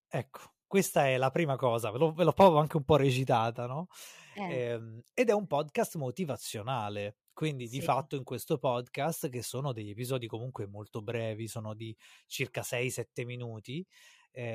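No technical faults can be heard anywhere in this speech recording.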